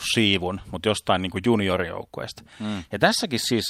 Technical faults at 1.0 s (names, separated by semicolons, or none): none